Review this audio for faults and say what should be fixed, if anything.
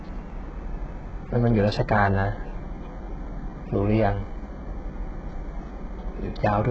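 HE-AAC compression, throughout the speech: the treble stops dead at 8 kHz, and the upper treble below that is rebuilt rather than coded. Upper bands are copied from lower ones and loosely shaped, so s sounds turn gritty and lispy, with heavy damage that points to a very low bitrate, likely around 8 kbps. Encode from the original at a much higher bitrate, or use a codec that does not rely on band replication.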